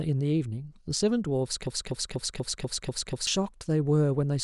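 At 1.67 s the speech locks into a broken-record loop: a fragment about 0.24 s long plays seven times back to back, exactly identical each pass, until 3.27 s. The likely cause is a stalled player or stream that kept resending the last piece it held, so the material due in that span never arrives. Unlike an echo, the repeats don't fade or smear, and unlike a brief stutter, the cycle persists for over a second and a half.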